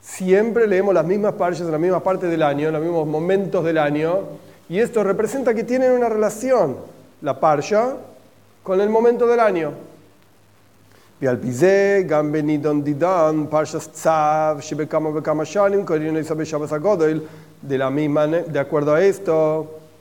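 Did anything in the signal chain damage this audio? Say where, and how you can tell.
Yes. Low bit depth without dither runs throughout: grainy, signal-following distortion about 40 dB below the signal, likely from truncation to 9 bits during sample-format conversion.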